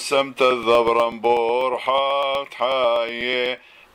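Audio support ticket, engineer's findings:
Periodic USB or driver dropouts, 0.51 to 3.83 s. Regular ticks every 0.123 s, about thirty, heard only under signal. Roughly 2 ms skipped each time, no silence inserted. Probable component: USB bus or audio driver, blocked at a fixed interval by a background task.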